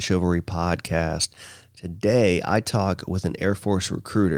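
A speech recording, and nothing is technically wrong with it.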